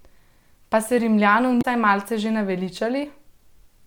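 At about 1.58 s the speech hits a patch of damaged data in the compressed stream, lasting roughly 70 ms to 1.65 s. A stretch of the encoded bytes there is wrong, so the decoder can't make sense of those frames, loses its footing and hunts for the next valid frame header before carrying on. You hear it as a short blip as playback picks up again.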